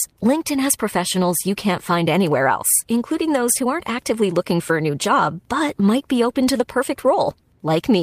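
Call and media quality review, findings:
No faults found in this speech recording.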